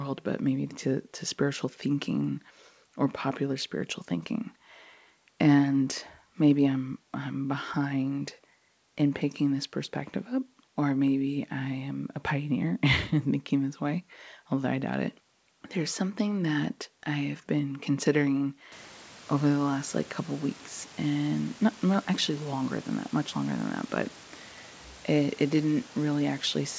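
No faults: the speech has no content above 8 kHz, consistent with call microphone processing and G.722 wideband coding that points to 64 kbit/s, and the room noise steps up by about 20 dB at roughly 18.5 s while staying about 25 dB below the speech.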